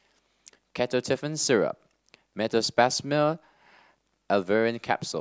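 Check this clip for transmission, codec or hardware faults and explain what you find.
No transmission, codec or hardware faults can be heard in the speech. There is nothing to report or explain.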